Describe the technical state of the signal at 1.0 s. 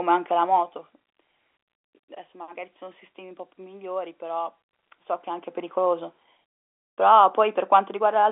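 At 1.0 s the level is falling with zipper noise, which runs from 0.36 to 1.12 s. The gain is being lowered in 2 dB steps, about ten per second, for a drop of roughly 10 dB, and nothing smooths the jump between steps. Each jump puts a tiny click into the waveform, so a faint ticking rides on the speech while the level moves. A smooth fade would lower the level with no ticking at all.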